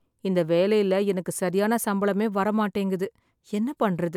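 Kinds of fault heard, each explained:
No audible faults in this recording.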